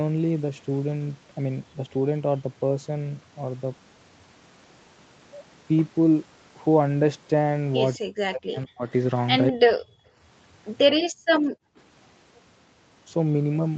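A speech clip with two kinds of fault, both tied to echo cancellation. From 7.98 to 8.92 s the voice sinks sharply, by as much as about 40 dB, and it drops out again briefly at 9.51 s. This is likely speech suppressed in double talk: with both ends talking at once, the canceller could not tell the local voice from the loudspeaker echo and turned the whole signal down. Next, the background is gated by the echo canceller three times, from 9.84 to 10.17 s, from 11.0 to 11.31 s and from 11.5 to 11.77 s. Each time the room sound falls away by about 40 dB for roughly a third of a second, then returns. The canceller is clamping the microphone hard while far-end audio plays and releasing it afterwards. Through all of this, nothing is heard above 8 kHz, which fits a wideband call path and is not itself a fault.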